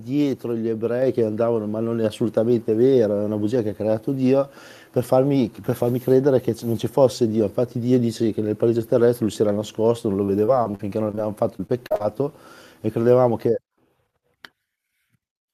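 At 1.02 s the microphone volume steps up by about 3 dB in one jump: the call software raised the input gain. Voice and background rise together and stay there, which separates it from a gradual fade or the pumping of a compressor.

From 10.25 to 11.19 s and again from 11.57 to 12.02 s, repeated packet loss gives a choppy, robotic sound. Short holes, none longer than about 40 ms, are patched by stretching the preceding sound, and they recur closely. Unlike a single clean dropout, pieces of sound go missing again and again.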